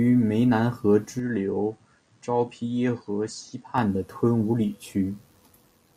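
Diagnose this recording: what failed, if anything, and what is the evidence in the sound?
The input stage failed. From 1.19 s, right after "湄南河", the speech turns duller, and nothing is left above 9.1 kHz. It also drops a few decibels in level, and a faint new noise floor appears well below the speech. There is no gap at the change. At 3.78 s, just before "的吞武里", the full band and level return. This is likely an input switched to a poorer device, a narrower-band microphone with its own gain and hiss, then switched back.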